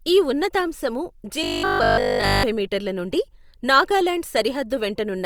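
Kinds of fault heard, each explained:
Robotic sound from repeated short buffers: audio likely arrived too seldom, so a roughly 20 ms piece kept repeating, leaving a rigid, metallic 50 Hz buzz after "ఈ ఉన్నతాంశము".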